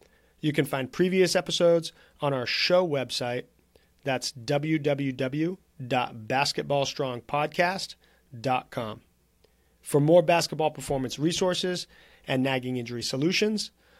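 No faults detected anywhere in the speech recording.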